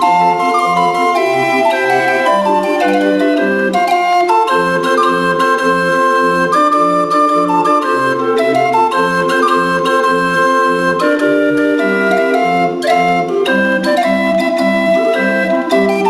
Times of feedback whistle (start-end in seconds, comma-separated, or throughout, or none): none